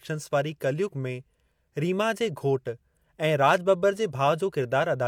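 A speech recording with no technical faults to point to. Nothing in it needs correcting.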